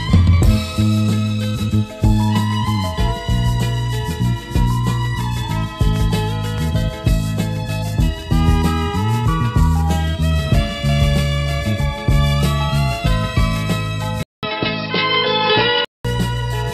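At 14.23 s the audio drops out for a brief 200 ms gap, then returns duller and boxier, with nothing above 5.5 kHz and a faint new background noise well below the signal, while the level stays roughly the same. This lasts until 16.05 s, when the fuller tone comes back. The abrupt, whole-character change points to the input being switched to a poorer device, likely a different microphone or a headset's call profile with a narrower band.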